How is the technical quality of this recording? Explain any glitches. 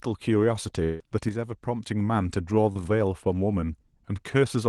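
The recording has three distinct glitches in its first three seconds, each with a recognisable transmission signature.

From 0.83 to 1.01 s the speech stops being real and turns into a synthetic continuation of the last sound, a buzzy, smeared hold that carries through the whole stretch with no silent gap before the voice resumes. This is likely a long network dropout: roughly 160 ms of audio never arrived, and the receiver filled the hole by extending what it last had. The lost portion is simply absent, so speech picks up further on.

Between 1.29 and 1.87 s the level drops abruptly by about 6 dB and then returns. The step is consistent with one channel dropping out of a stereo feed that is being summed to mono. Material common to both channels loses half its contribution, which accounts for the 6 dB fall. Anything present only in the missing channel would vanish for those 0.58 s.

At 2.73 to 2.77 s there is a brief smear or wobble lasting about 20 ms. 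This is short concealed packet loss: about 20 ms of audio failed to reach the decoder in time. The decoder bridged it by extrapolating the preceding sound and blending back into the real signal. The repair is short enough to come across as a momentary roughness rather than a gap.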